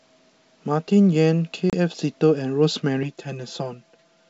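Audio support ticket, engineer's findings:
Hard-edged silent gap at 1.70–1.75 s, then speech resumes slightly distorted. Packet loss on the ADPCM call: about 30 ms dropped, roughly three packets; the decoder's predictor and step size lose track, then resync.

Hollow, phasey sound from 3.03 s to the end. Channel delay with comb filtering: one channel about 5 ms late, summed to mono, giving notches from around 100 Hz upward.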